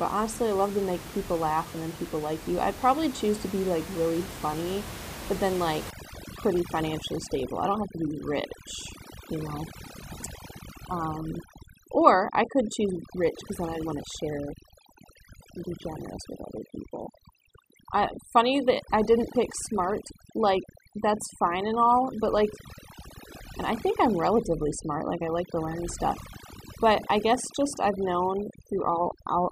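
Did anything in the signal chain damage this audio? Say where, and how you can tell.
Yes. Overdone noise removal in call processing damages the speech from 5.9 s to the end. Room noise, about 13 dB below the speech, drops and breaks up into twinkling specks. The suppressor cuts bands near its noise estimate. Quiet speech detail goes too.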